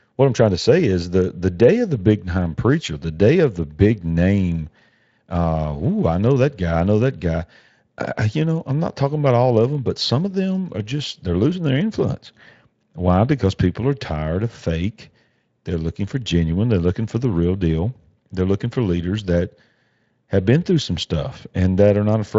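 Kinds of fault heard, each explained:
Nothing stood out on listening to this speech clip that would call for a fault to be listed.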